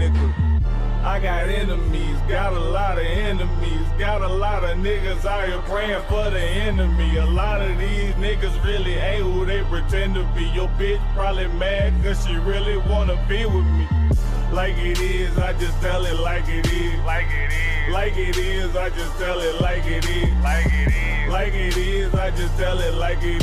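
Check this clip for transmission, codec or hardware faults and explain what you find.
No transmission, codec or hardware faults are audible here.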